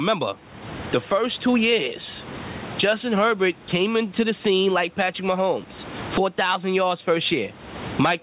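Throughout the speech, the level pumps: the gain swings by around 25 dB, pulling down hard as the talker gets loud and recovering between phrases, so loud and soft passages sit closer together and the delivery sounds squashed. This gain pumping likely comes from input gain set far too high, with a fast limiter or compressor clamping each loud moment. The room noise sits about 33 dB below the speech, and nothing reaches above 4 kHz, which fits a narrowband telephone-grade call codec.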